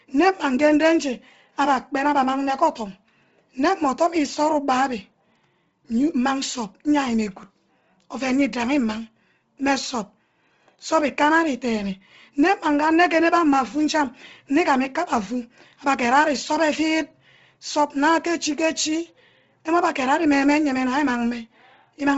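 Throughout, the speech carries a breathy, grainy edge, and nothing remains above 7.7 kHz. The likely cause is heavy Bluetooth LC3 compression, which discards upper-band detail and refills it with noise. The sound points to a low bitrate near 24 kbps with 7.5 ms frames.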